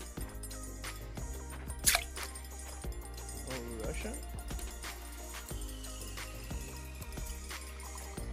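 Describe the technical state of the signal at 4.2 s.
At 4.2 s a GSM phone buzz sits under the audio, running from 2.91 to 4.86 s. A nearby 2G phone on a call pulses about 217 times a second, and the audio circuitry rectifies those radio bursts into a hard, raspy buzz about 22 dB below the signal. A spectrogram shows steady horizontal lines at 217 Hz and its many harmonics, and the waveform carries a regular pulse train.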